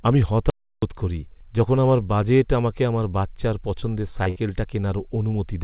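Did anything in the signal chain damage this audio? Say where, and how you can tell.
Yes. Audio dropout to silence, 0.50 to 0.82 s, before "করি যখন আমার বাজেট": about 0.32 s of flat silence in the waveform and a blank spectrogram column, likely an input-stage or link loss.

Short concealed packet loss in the network and jitter-buffer stage at 3.80 to 3.84 s, after "বাজেট আমাকে আমার বাচ্চার", and 4.24 to 4.28 s. Each is a roughly 20 ms smear of repeated spectrum.

Burst of packet loss, 4.30 to 4.38 s: about 60 ms of concealment. It shows as a held, decaying continuation of the last sound that ends where the audio resumes further on.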